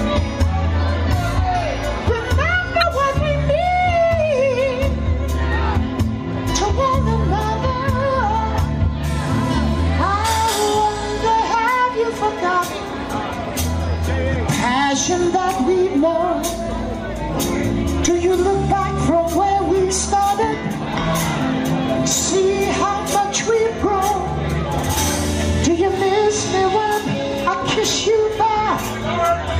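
At 2.79 to 2.83 s a brief disturbance of about 40 ms cuts into the sound. This is damaged data in a compressed stream: bytes in the encoded file were corrupted, so the decoder misread those frames, lost its sync and searched for the next valid frame header before playback resumed.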